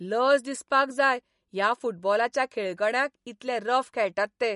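MP3 compression artefacts run through the whole clip, from start to finish. Nothing sounds above about 11.2 kHz, a hard treble cut that points to a bitrate near 48 kbps. The likely cause is an MP3 encoder short of bits, cutting the highest band and dropping weak frequency lines that switch on and off from frame to frame. The result is a plainly audible watery, swirling texture, with metallic chirps on s sounds and smeared attacks.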